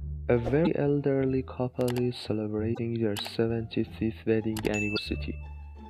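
Three short bursts of damaged data in a compressed stream break up the audio, at 0.62 to 0.67 s, 2.71 to 2.79 s and 4.93 to 4.98 s. Each lasts well under a tenth of a second and sounds like a brief chirp, squawk, click or short hole. At those points the compressed frames carry wrong bytes. The decoder misreads them, loses its place in the stream, and hunts for the next valid frame before clean sound returns.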